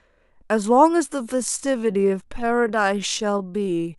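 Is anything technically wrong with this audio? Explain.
Yes. From 1.0 s to the end, the speech abruptly slows to about 0.68 times its pace while pitch stays put, so it drags. This time-stretched section was likely made by software lengthening the audio, repeating short fragments to preserve pitch.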